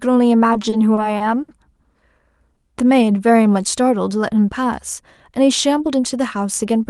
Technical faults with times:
0.53-1.50 repeated stalls (stutter)
2.57-3.82 jitter buffer slow-down
5.78-6.89 jitter buffer speed-up

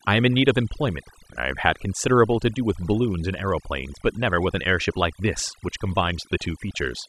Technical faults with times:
0.00-7.08 overdone noise removal

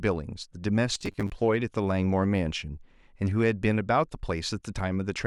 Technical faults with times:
0.95-1.35 robotic sound from repeated short buffers

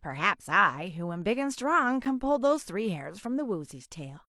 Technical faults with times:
2.05 gap between stream segments

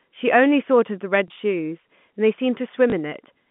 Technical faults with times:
1.28-1.30 packet loss with last packet repeated
2.90-2.92 packet loss with last packet repeated

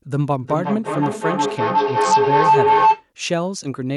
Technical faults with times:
0.38-3.09 feedback howl
1.58-2.44 Bluetooth SBC bit pool drop

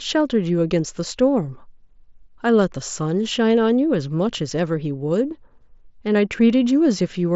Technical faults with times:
none

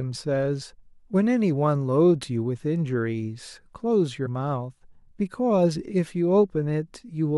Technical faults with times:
0.61 damaged data in a compressed stream
4.25 damaged data in a compressed stream

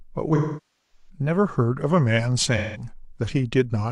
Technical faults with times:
0.35-1.09 AAC frame loss with concealment
2.57-2.88 AAC frame loss with concealment

